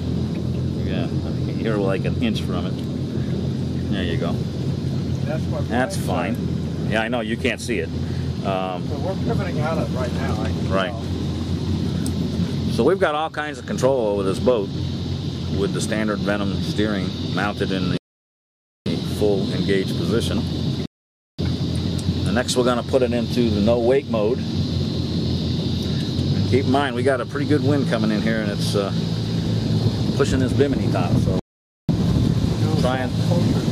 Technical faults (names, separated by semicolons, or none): rebuffering stall